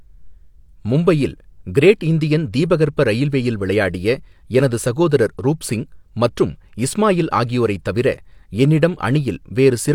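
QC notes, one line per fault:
No faults heard in this speech recording.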